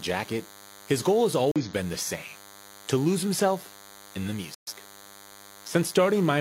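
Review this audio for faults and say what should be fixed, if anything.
A DECT cordless phone buzz runs throughout, roughly 25 dB below the speech. A nearby handset's 10 ms radio bursts are rectified into a 100 Hz buzz, seen as evenly spaced harmonic lines across the spectrogram. Keep DECT bases and handsets well away from the recording chain, and use shielded, balanced cabling.

A corrupt frame was muted at 1.52 to 1.62 s, a gap of about one frame, and at 4.54 to 4.73 s, a gap of about three. The decoder rejected damaged frames and inserted silence, seen as abrupt flat-line holes in the waveform. Use error-protected transport or storage and verify checksums before decoding.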